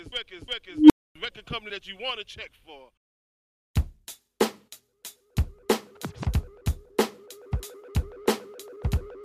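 The audio has an unstable filter fault from 0.72 to 1.15 s: a tone around 300 Hz swells over about 0.18 s, clips, then cuts to 0.26 s of silence as the runaway recursive filter overflows and resets. Expect an expanding waveform envelope and a bright horizontal spectrogram band, then an empty gap.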